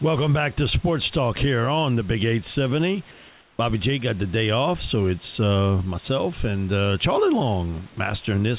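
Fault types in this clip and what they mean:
Comfort noise in place of the background: From 3.11 to 3.59 s, the real room background gives way to a smooth, featureless hiss about 3 dB quieter. The swap lasts 480 ms. The likely cause is the sender pausing in silence while the receiver synthesises filler noise.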